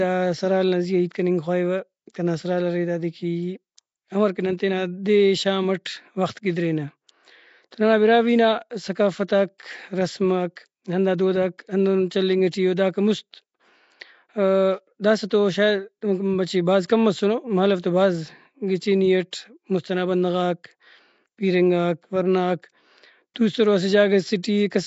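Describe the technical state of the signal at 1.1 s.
At 1.1 s the speech has a rough, hissy halo and a smeared, underwater quality, with nothing above 7.7 kHz. This runs through the whole clip and is likely Nellymoser compression: coarse block coding starves weak bands of bits and fills them with noise.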